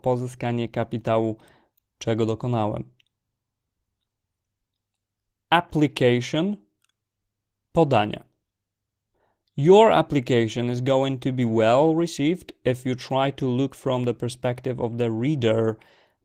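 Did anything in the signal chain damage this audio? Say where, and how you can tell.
Yes, at the codec stage: Opus voice compression runs through the whole speech clip, with damage that is plainly audible. The sound points to a low rate, around 16 kbps, in hybrid mode, so coarsely quantised excitation makes the voice hoarse and slightly robotic, and the thinly coded band above 8 kHz sounds dull.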